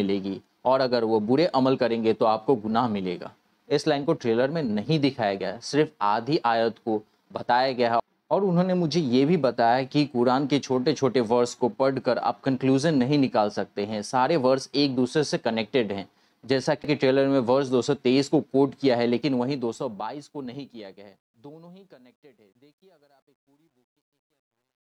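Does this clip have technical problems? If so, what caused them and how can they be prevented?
Yes. The fade-out, which starts around 19 s and ends at 24.8 s, has truncation distortion from 19.16 s to 24.81 s. As the level drops, the gain stage rounds each sample to a coarse grid, which fits an 11-bit path with no dither. The worst stretch is from 21.69 s to 24.81 s, where the tail turns gritty. On the waveform, the decaying tail becomes a few flat square steps. On the spectrogram, it shows broadband grainy hash rather than a smooth noise floor. To prevent it, run fades at high internal bit depth and add dither whenever reducing word length.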